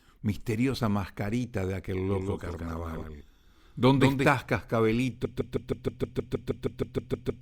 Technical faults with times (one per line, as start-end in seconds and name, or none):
0.74-0.78 compressed frames skipped
2.11-4.29 doubled audio track
3.01 compressed frames skipped
5.25-7.42 broken-record loop